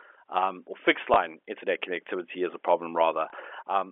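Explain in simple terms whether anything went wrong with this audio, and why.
Two tiny blips at 1.14 to 1.16 s and 3.30 to 3.32 s are packet loss with last packet repeated: a missing 20 ms chunk was replaced by replaying the previous one.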